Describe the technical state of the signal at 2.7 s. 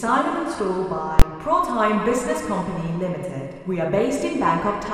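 At 2.7 s the signal is intact, with no audible fault at that moment.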